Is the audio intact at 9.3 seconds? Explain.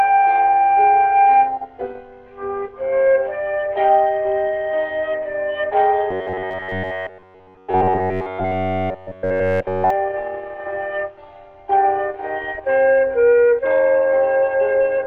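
No. From 6.11 to 9.90 s the sound becomes robotic, a rigid metallic buzz at about 94 Hz that holds entirely throughout. The likely cause is repeated short buffers: a roughly 11 ms slice looping while new audio is skipped. Unlike dropouts, there is no silence.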